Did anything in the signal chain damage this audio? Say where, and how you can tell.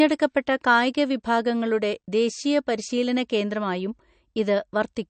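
Yes. The speech sounds watery and swirly throughout, with nothing above 8.6 kHz. That points to the codec stage: likely MP3 compression at a low bitrate near 40 kbps. The encoder cuts the treble at a fixed point and drops weak frequency lines that flicker between frames.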